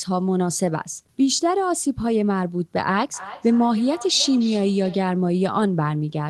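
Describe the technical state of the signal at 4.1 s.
At 4.1 s there is feedback echo between two devices, running from 3.14 to 5.14 s. A second device replays the speech into the microphone. Thin, ringing repeats return about every third of a second, up to about 16 dB below the speech.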